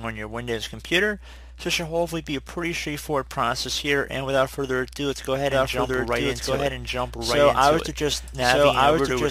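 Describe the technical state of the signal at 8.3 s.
At 8.3 s a doubled audio track is playing. It runs from 5.52 s to the end. A second full-band copy trails about a second behind, at roughly equal level, with no decay. It most likely comes from a slower capture path recording the audio again.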